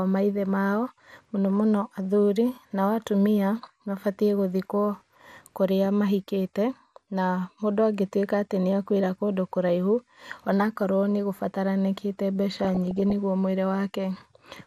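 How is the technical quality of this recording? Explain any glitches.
The technical quality is poor, with dull, coarse coding damage throughout and one burst of burbling distortion near the end.

MP2 compression: Throughout, the speech sounds muffled and gurgling, with granular roughness. This likely comes from MPEG Layer II coding at a low rate, around 80 kbps, starving its 32 sub-bands of bits. On a spectrogram, the upper bands blink on and off in blocky patches.

DAB burbling: From 12.56 to 13.13 s, just before "nĩgũo mũĩri", bit errors of roughly half a percent corrupt sub-band samples. Single bands get short blips of noise. The spectrogram shows scattered bright rectangular flashes.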